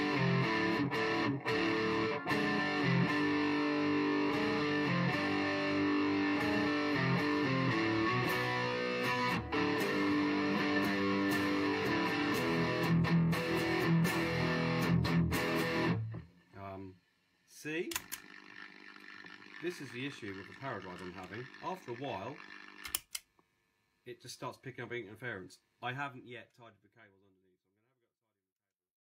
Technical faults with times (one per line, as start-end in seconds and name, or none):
none